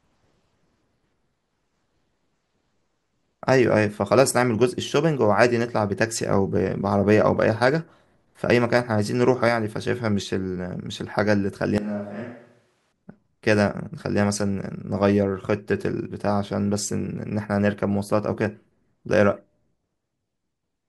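From 11.78 to 12.92 s the speech abruptly turns roomy and hollow: a switch to a distant microphone, likely because the close microphone's signal dropped out for just over a second. Level falls by roughly 10 dB, bass thins, and room noise rises to about 35 dB below the speech. On a waveform the envelope steps down sharply at the start and back up at the end; a spectrogram shows weaker low frequencies and smeared, reverberant tails.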